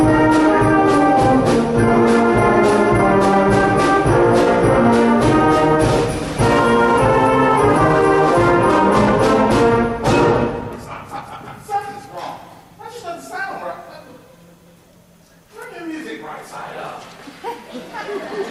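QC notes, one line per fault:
10.61 to 11.44 s, jitter buffer speed-up: the audio runs at 110% speed and sounds hurried, as the receiver cut short pitch-period pieces, around a tenth of a second in total. The spectrogram shows events packed closer in time while harmonic spacing stays the same.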